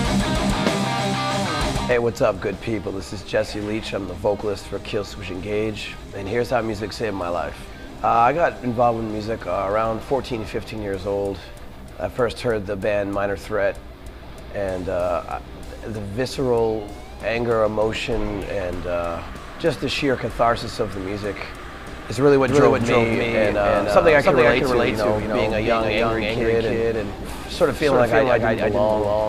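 At 22.48 s the audio picks up a doubled audio track, most likely because a second, slower capture path or an edit has mixed in another copy of the same signal held out of step. The copy trails the original by around 300 ms, at roughly the same level, and runs to the end. It cuts in abruptly with full bandwidth and no decay or room colour, so every sound is followed by a clean, equally loud repeat.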